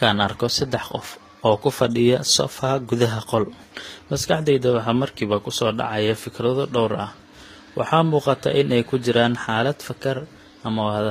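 Throughout, the speech carries the artefacts of both codecs heard together and nothing above 14.9 kHz, likely from transcoding between lossy codecs: a low-rate HE-AAC pass re-encoded as Vorbis.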